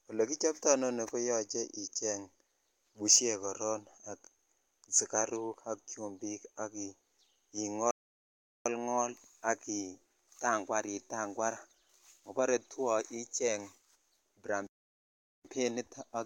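At 7.91 s the speech just stops dead for about 0.75 s, picking back up at 8.66 s, and it happens again from 14.67 to 15.45 s, roughly 0.78 s. Both are playback stalls, likely the player starving for data or its thread getting blocked.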